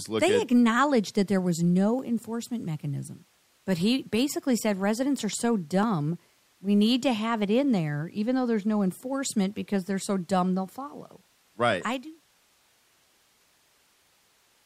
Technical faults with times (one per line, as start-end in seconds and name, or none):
none